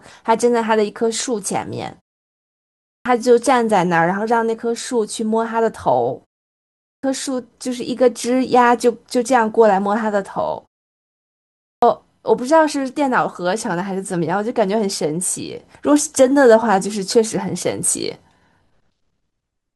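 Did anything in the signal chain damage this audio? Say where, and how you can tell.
Yes: clipped start after a pause at the playback device, which sleeps in silence. At 2.78, 6.76 and 11.52 s, about 0.27–0.30 s of speech onset vanishes; waveforms jump abruptly from flat silence.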